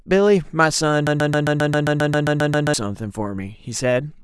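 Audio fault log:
1.07–2.74 s, broken-record loop: the speech stops progressing and a single fragment of about 0.13 s repeats exactly, back to back, 13 times, giving a rapid stutter at roughly 7.5 repetitions per second. The likely cause is a player, encoder or stream that stalled and kept outputting the last chunk it held. Whatever speech should have played in those 1.7 s is missing, and normal playback resumes after the loop ends.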